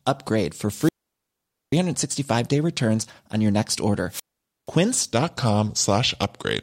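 At 0.69 s, just after "upgrade for", the radio link from the wireless microphone fades far enough that the receiver's squelch shuts the output off. This is a wireless microphone squelch dropout. A short burst of hiss rises first, then about 0.84 s of near silence, and the speech returns by 1.81 s. The same thing happens at 4.08 s, after "returns on your next". This time the mute lasts about 0.48 s, and the speech comes back by 4.69 s.

From 5.13 s to the end, the final section is played at the wrong speed, at 0.875 times its original rate. The likely cause is that this part was fitted to the wrong clock during editing or playback. Speed and pitch drop together, so the speech there becomes slower and deeper, lowered by about two semitones compared with the rest of the clip.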